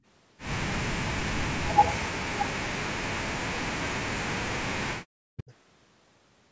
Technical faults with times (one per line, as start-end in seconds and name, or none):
0.75-5.52 speech suppressed in double talk
5.38-5.43 echo leak